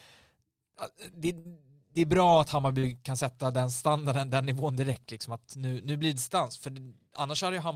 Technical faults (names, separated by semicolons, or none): burst of packet loss; short concealed packet loss